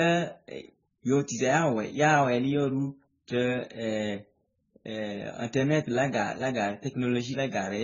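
Speech with nothing above 7.1 kHz and two sets of compression artefacts layered across the whole recording, likely from transcoding between lossy codecs, which fits 16 kbit/s AAC-LC re-encoded as 34 kbit/s MP3. On a spectrogram this shows as a hard ceiling at 7.1 kHz with smeared, blocky texture beneath it.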